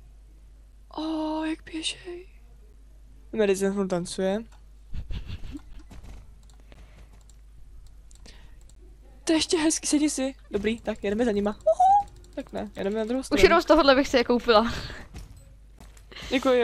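Gaps between stream segments cut hard-edged silent holes of about 6 to 17 ms into the audio at 0.72, 2.73, 5.73, 6.74, 8.75, 11.78, 12.79 and 15.79 s, always on a one-second grid that fits 1 s segments whose time stamps don't meet. Unlike a dropout, nothing is missing; silence is simply inserted.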